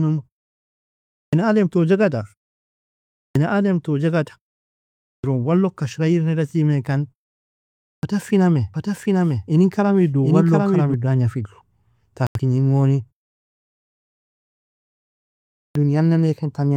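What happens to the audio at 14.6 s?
At 14.6 s the speech plays through intact, with no dropout, distortion or other disturbance at that point.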